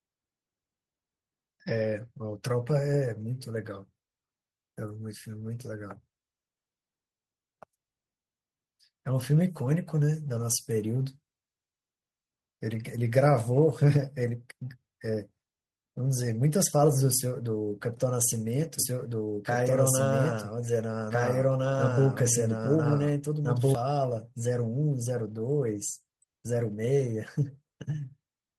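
A doubled audio track runs from 18.79 to 23.75 s: a second copy of the speech sits about one and a half seconds behind the original, at roughly the same level, so each phrase is heard again over whatever follows it. The copy is full-band and dry, with no decay or room colour, and it appears and vanishes abruptly at those times. The cause is likely a second capture through a slower path, or an edit leaving two copies out of step.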